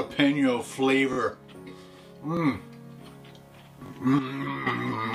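The audio has three repeated buffers: at 1.13 s the same 21 ms piece plays twice more, at 2.37 s once more, and at 3.86 s twice more, which fits a 1024-sample buffer being replayed when new data arrived late. Unlike a dropout there is no silent gap and essentially nothing is skipped. A stutter of identical repeats with hard joins is heard instead. From 4.19 s to 4.67 s there is a sudden gain jump of about 9 dB downward, likely from a gain setting applied without a ramp. It differs from a fade because the change is instantaneous, and the background noise drops together with the sound.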